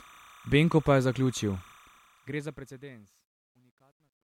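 Speech runs through the whole clip over a steady chirping warble that flips between two pitches near 1 kHz and 2 kHz, sitting about 30 dB under the speech. This is timecode bleed: linear timecode from a neighbouring track or cable has leaked into the audio path, and its square-wave pattern, ticking at a rate that fits 29.97 fps code, stays constant behind the words.

From 1.72 s, just after "pa je zaključil", the speech starts to sound grainy as the level falls, and from 3.01 s to the end at 4.29 s it turns at its grittiest. This is truncation distortion on a fade. The fade-out was processed without dither at a resolution that points to roughly 11 bits, so the quietest part of the waveform collapses into a few coarse steps.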